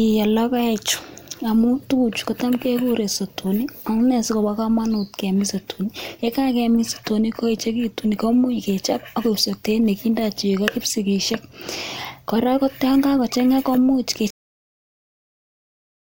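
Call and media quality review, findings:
Cut-off end at 14.30 s: speech stops mid-sound into digital silence, no decay. Final buffers never written. Unlike a fade-out or natural pause, there is no tail.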